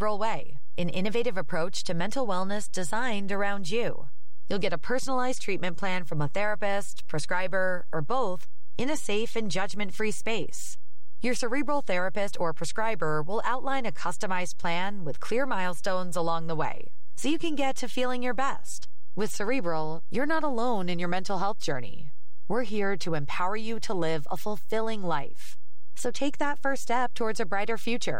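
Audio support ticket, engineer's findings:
DC offset present throughout, about -21 dBFS. Waveform sits shifted off the zero line for the entire speech clip, eating headroom on one side. Spectrogram: steady band at 0 Hz. Inaudible itself. Probable component: input stage or converter lacking DC blocking, passing a constant bias.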